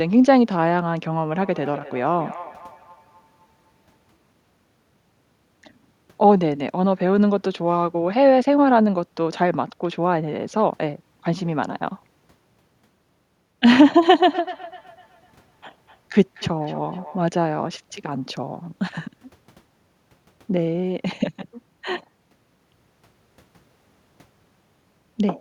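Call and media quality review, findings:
Feedback echo between two devices, 1.32–4.12 s and 14.24–17.26 s. Speech returns at a steady interval of roughly 300 ms, peaking about 20 dB and about 19 dB below the direct speech. Probable component: a second device in the same room on the call. Its speaker output is re-captured by the first device's microphone, which that device's echo canceller does not remove.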